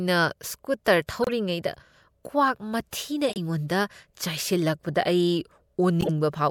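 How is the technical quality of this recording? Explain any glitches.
The speech has three glitches, each a corrupt frame decoded: at 1.23 to 1.31 s, 3.29 to 3.38 s, and 6.01 to 6.09 s. In each, flipped bits in a few compressed frames got played anyway, putting energy at the wrong frequencies. You hear a short chirpy burst, peaking around -15 dBFS, with the last one louder at about -10 dBFS.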